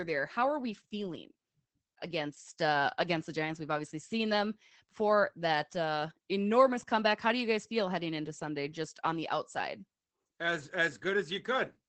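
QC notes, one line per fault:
Throughout: Opus voice compression. The speech sounds muffled and hoarse, with a faint robotic edge and no air above about 8 kHz. The SILK linear-prediction coder models the vocal tract and codes the excitation coarsely, which roughens the voice, while wideband operation cuts everything above 8 kHz. The plainly audible damage fits a low bitrate around 12 kbps with 20 ms frames.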